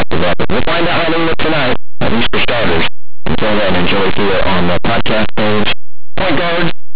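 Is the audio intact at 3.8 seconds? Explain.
No. At 3.8 seconds, as across the whole clip, the speech comes through with very loud, harsh distortion. This is linear audio read as companded: plain linear 8-bit samples are decoded as mu-law codes, so small values just to one side of zero expand into the loudest outputs.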